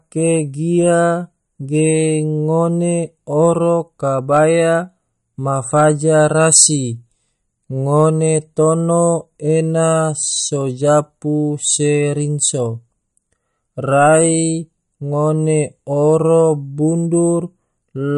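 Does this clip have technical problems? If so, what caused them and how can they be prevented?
Yes. MP3 compression damage runs through the whole clip. The speech has nothing above 11.1 kHz, and a watery, swirling texture is plainly audible. The likely cause is an MP3 encoder starved of bits, which fits a low bitrate around 48 kbps: it drops the treble at a fixed cut-off and zeroes weaker frequency lines, and those lines flicker on and off between frames. Encoding at a higher bitrate, or keeping a lossless copy, would prevent this.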